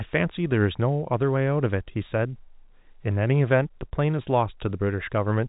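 No technical faults are audible.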